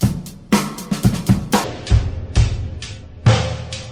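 From 1.64 s to the end, there's a section at the wrong speed: it drops to about 0.55x, sinking roughly ten semitones, deep and dragging, likely from playback on the wrong clock.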